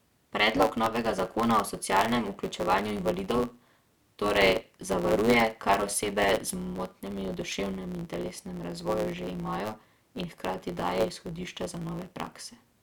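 Throughout the speech runs with a block size mismatch (truncated): one stage hands over blocks about 9% longer than the next stage takes in, and the tail of each block is dropped. That shortfall makes the speech play 1.09 times too fast and leaves a steady buzz at 109 Hz, the rate at which blocks are cut. Unlike a sample rate mismatch, the timbre stays while the pace rises.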